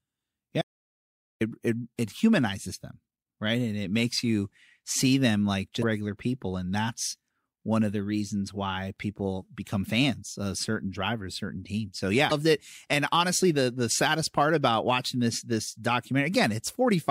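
Audio dropout to silence runs from 0.62 to 1.41 s. The speech cuts off abruptly and the clip goes completely silent, with no room tone underneath, for about 0.79 s, until speech resumes on "it it humanizes them". Whatever was said in that stretch is lost. The likely cause is that the input stopped reaching the recorder, through a disconnected device, a failed link or an accidental mute, while recording carried on and wrote silence in its place.

Damaged data in a compressed stream appears at 5.80 to 5.84 s, between "you see them like" and "regular people", and again at 12.28 to 12.32 s. Each event lasts about 40 ms. In both places some bytes of the compressed stream were lost, zeroed, overwritten or mixed with other data. The decoder misreads or rejects those frames and loses sync while it searches for the next valid frame header. The result is a brief chirp, squawk, click or short hole where the clean audio should be.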